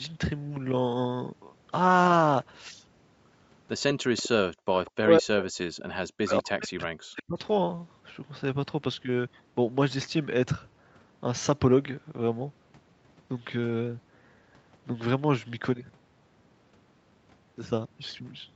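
Speech over a call, with a cluster of echo-canceller trouble between about 4 and 7.4 seconds. An echo leak shows up at 4.17–4.29 s, 4.86–4.91 s and 5.77–5.83 s: a faint copy of the talker about 196 ms late, roughly 15 to 25 dB down, most likely loudspeaker sound the far end's canceller didn't fully remove. At 4.54–4.66 s you get background gated by the echo canceller, with the room sound ducking by about 40 dB for around a tenth of a second before coming back. Then speech suppressed in double talk hits at 5.02–5.47 s and again at 5.99–7.38 s, with the voice dipping by up to about 40 dB in pieces, likely because the canceller clamped down while both sides were talking. Through all of it the Opus path tops out at 8 kHz.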